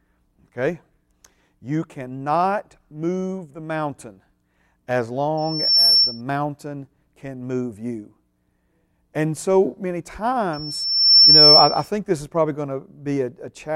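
Loudspeaker feedback squeal at 5.37–6.21 s and 10.53–11.89 s (after "so many", ending before "this is probably going"). The microphone re-amplifies its own loudspeaker until a 5.4 kHz tone grows past the speech: about 10 dB within half a second, then about 15 dB over about 0.7 s.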